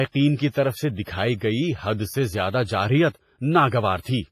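A washy, ringing hiss breathes with the speech throughout, with nothing above 15.4 kHz, which points to heavy WMA compression, likely at a low bitrate near 24 kbps. Between 1.03 and 1.07 s, after "کی طرف سے" and before "گئی حد سے زیادہ", pre-echo smears a 37 ms hiss ahead of the attack, as block-wide quantisation noise fills the preceding quiet.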